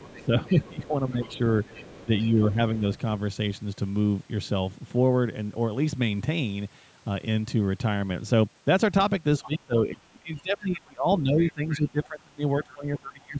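From 0 to 0.71 s, a faint second voice sits under the talker, about 25 dB below the speech. This is the other side's voice leaking through. It is likely loudspeaker echo that the echo canceller failed to remove from the microphone.

From 0.21 to 1.4 s, the talker's speech dips in patches by about 10 dB. This is speech suppressed in double talk. The canceller likely could not separate the talker from the echo and turned both down.

The leak returns from 1.08 to 2.3 s, again about 25 dB down. Another dip of about 10 dB follows from 2.05 to 2.83 s. From 9.4 s to the end, the suppression is much deeper, about 25 dB. It cuts into the speech for roughly three seconds in total. Within that stretch, scraps of echo surface from 11.38 to 11.89 s, about 20 dB down, and from 12.64 to 12.75 s, about 30 dB down.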